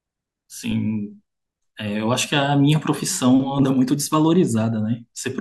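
At 3.59 s the speech has a brief glitch from damaged data in the compressed stream. Corrupted bytes there throw the decoder out of sync until it finds the next frame.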